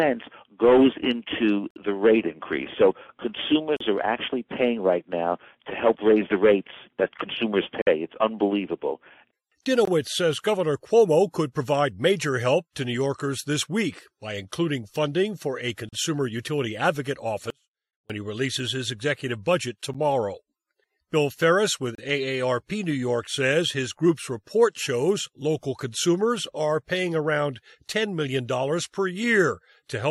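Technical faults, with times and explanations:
1.71–1.76, 3.77–3.81, 7.82–7.87, 9.85–9.87, 15.89–15.93, 19.94, 21.95–21.98 s: gap between stream segments. Hard-edged holes of silence, 10 to 54 ms long, break the sound. They fall near two-second steps, which fits 2-second stream segments. The timestamps leave small spaces that the player fills with silence. Nothing is lost.
17.50–18.10 s: audio dropout to a faint residue. The sound cuts out abruptly for about 0.58 s and returns just as suddenly. Only a faint leak remains, roughly 40 dB below normal. The signal was likely lost upstream while the later path stayed live.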